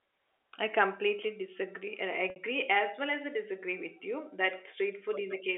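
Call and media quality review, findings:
Packet loss with pitch repetition at 2.30–2.36 s, just before "as well as I": 60 ms gap bridged by repeated pitch period, buzzy held tone. Receiver concealment, not a dropout.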